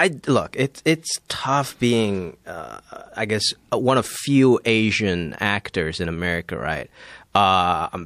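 Speech with pre-echo at 1.28 s, just before "tough being uh I", and at 7.33 s: about 12 dB and about 10 dB of hiss lead each attack by 18 ms, which fits a 36 ms transform window without short-block switching. Spectrograms show broadband smears before the onsets.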